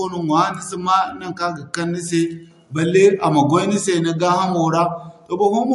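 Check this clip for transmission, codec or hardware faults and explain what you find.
One codec fault runs through the whole clip: MP3 compression. The likely cause is an encoder starved of bits, consistent with roughly 48 kbps. It removes everything above 11.3 kHz and drops weak frequency lines that flicker between frames, making the speech plainly watery, with chirpy s sounds and blurred onsets.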